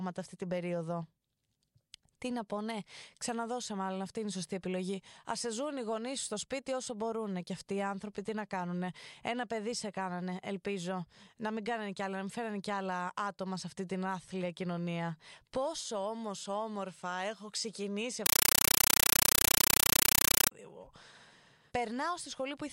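A compressed stream played as audio, likely an undecoded Dolby Digital stream, replaces this speech after "έχω ξεκινήσει" from 18.26 to 20.51 s with loud static: 8 ms noise bursts at 31.25 Hz.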